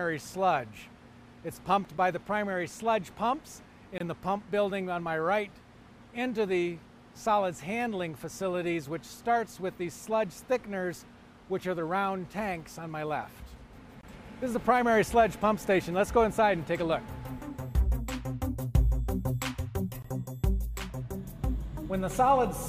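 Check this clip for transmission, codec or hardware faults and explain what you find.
Four holes come from a gap between stream segments: 1.98 s (7 ms), 3.98–4.01 s, 14.01–14.03 s and 20.02–20.05 s. At 2-second segment joins, timestamps leave space the player fills with silence. The result is hard-edged dropouts: flat silent runs in the waveform, blank vertical stripes on a spectrogram.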